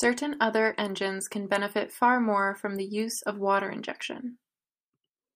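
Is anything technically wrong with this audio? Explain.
No, nothing technically wrong can be heard here.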